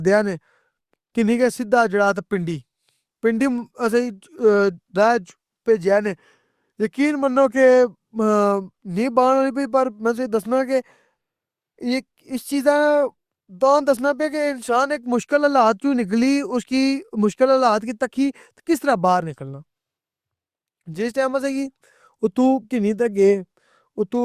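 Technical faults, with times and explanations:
No technical faults detected anywhere in the recording.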